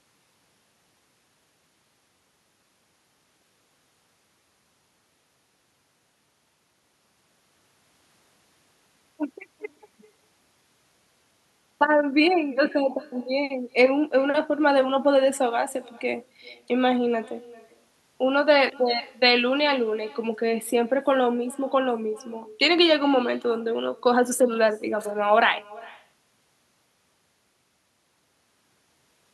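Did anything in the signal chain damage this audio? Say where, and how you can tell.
Yes. The damage sits in call processing: the far end has no working echo canceller, so its loudspeaker output leaks into its microphone and returns to the talker. This echo with no canceller runs throughout the speech. Every phrase is trailed by a faint copy, about 24 dB down, arriving roughly 0.4 s later. That lag reflects the network round trip, and the acoustic path makes the returned copy sound thin.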